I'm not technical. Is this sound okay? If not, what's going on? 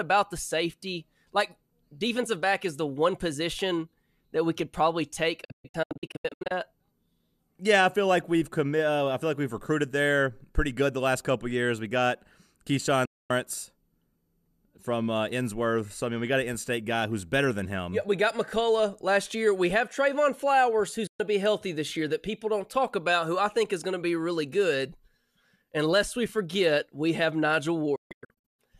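No. It's a digital broadcast dropout: the receiver lost a clean signal and briefly muted. There are gaps at 5.44–6.51 s (choppy, after "we could probably take"), 13.05–13.31 s, 21.07–21.20 s (before "to be healthy this") and 27.95–28.59 s (also choppy). Those bits are simply gone.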